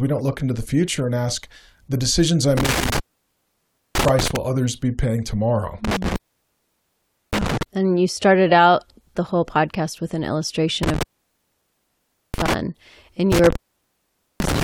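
Intermittent contact in this speech clip at 2.57–4.36 s (after "ask the decisions I'm", before "others be paying tomorrow"), 5.85–7.63 s (after "others be paying tomorrow"), 10.83–12.54 s and 13.32–14.64 s. A loose cable or plug opens for about 0.96, 1.17, 1.31 and 0.84 s respectively, cutting the sound to faint hiss, with crackle where contact breaks and returns.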